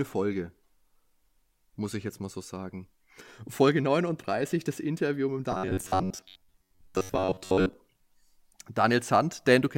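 From 5.52 to 7.73 s the speech turns into robotic sound from repeated short buffers: a rigid metallic buzz fixed at 93.8 Hz that loosely tracks the words. The likely cause is audio arriving too seldom, so a chunk of about 10.7 ms is replayed for most of that stretch. Unlike a stutter, each repeat is too brief to hear as a repeat and fuses into a steady pitch.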